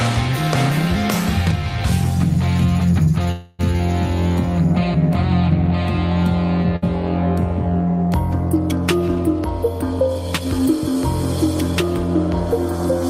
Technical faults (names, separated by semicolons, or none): call audio freeze; burst of packet loss; jitter buffer speed-up